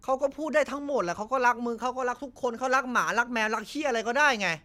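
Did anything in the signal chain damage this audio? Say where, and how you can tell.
No, nothing in the signal chain damaged this audio.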